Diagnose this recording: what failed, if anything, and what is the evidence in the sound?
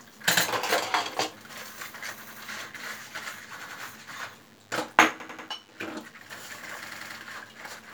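Driver or buffer stage: a repeated buffer stutters at 0.37–0.46, 2.23–2.42, 3.62–3.81, 5.20–5.48 and 6.87–7.15 s. Each time, an identical 93 ms piece replays one to three times with hard joins, which fits a 4096-sample buffer. Exact repeats with no gap set it apart from dropouts.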